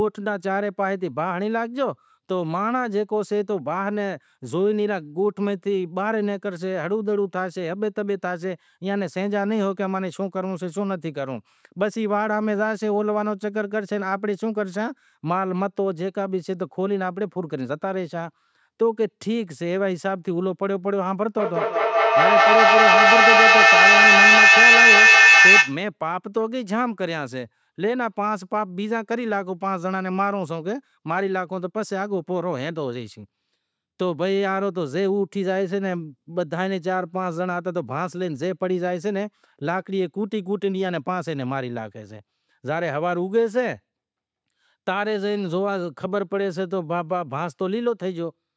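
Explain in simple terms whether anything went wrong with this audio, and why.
From 21.36 to 25.86 seconds there is feedback echo between two devices. Two devices on the call heard each other. Each sound comes back about every fifth of a second. The repeats pile up and grow louder than the speech.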